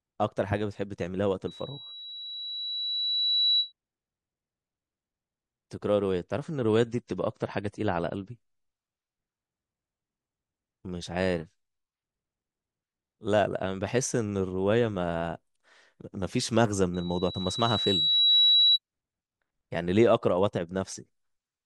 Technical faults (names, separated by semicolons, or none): loudspeaker feedback squeal; adaptive stream at a lower bitrate